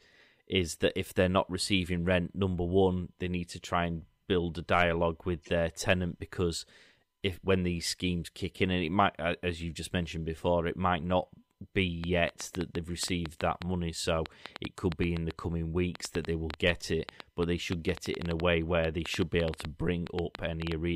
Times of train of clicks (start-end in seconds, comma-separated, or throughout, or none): 12.04-20.73